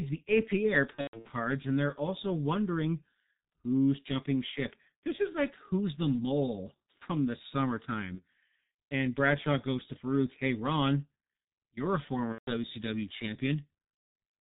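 Throughout, the G.723.1 codec at 6.3 kbit/s muffles everything above 4 kHz and leaves a hoarse, smeared quality, unlike plain low-pass filtering, which stays clean. Packet loss concealed by the speech codec then stretches the sound into a fading buzzy tone or coloured noise at 0.96–1.30 s (gaps scattered, longest about 120 ms), 8.15–8.22 s, 12.32–12.52 s and 13.97–14.15 s. These fade out and are muted in longer runs rather than cut off with the clicks of unconcealed dropouts.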